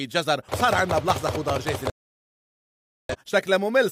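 At 1.9 s there's a digital broadcast dropout: the receiver stopped getting usable frames and muted, so the sound cuts to silence for about 1.2 s, coming back at 3.16 s.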